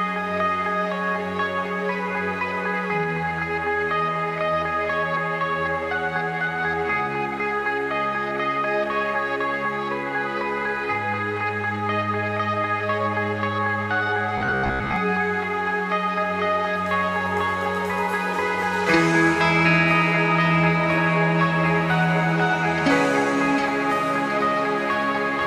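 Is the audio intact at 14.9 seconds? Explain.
No, from 14.38 to 14.96 s it turns into a rigid metallic buzz near 66.7 Hz, robotic sound likely from repeating 15 ms buffers while most new audio is skipped.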